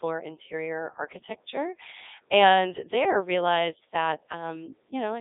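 From start to finish the speech runs through a Codec 2 vocoder, with heavy damage. The decoder rebuilds each frame from pitch, voicing, energy and a spectral envelope using summed sine waves, so the original waveform is gone. The result is buzzy and robotic, which fits the 3.2 kbit/s mode. It sits in a 300 Hz to 3.7 kHz line band with nothing above 3.8 kHz. Plain band-limiting or a waveform codec would keep natural texture, but here the texture is replaced by a synthetic drone.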